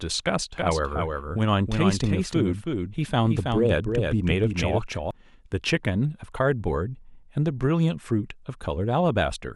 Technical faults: doubled audio track

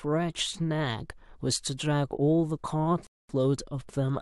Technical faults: rebuffering stall

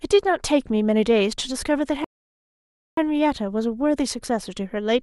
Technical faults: rebuffering stall

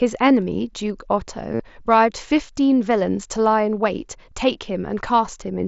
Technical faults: concealed Bluetooth headset packet loss

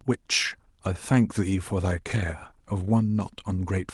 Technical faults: none

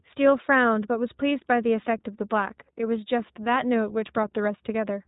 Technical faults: iLBC codec

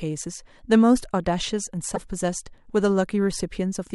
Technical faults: broken MP3 bit reservoir

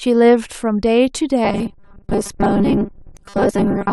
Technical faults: robotic sound from repeated short buffers

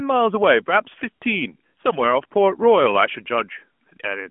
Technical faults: none

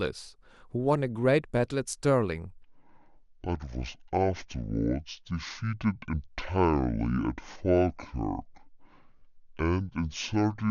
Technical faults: section at the wrong speed

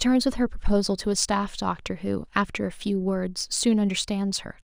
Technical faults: crude rate conversion

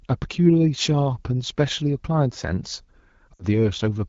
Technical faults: lost AMR speech frames

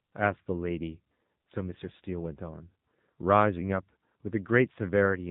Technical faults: AMR narrowband mobile codec

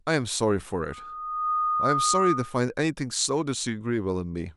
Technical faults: loudspeaker feedback squeal

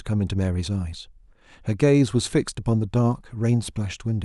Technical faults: none

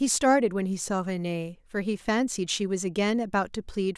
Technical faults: bit error spike

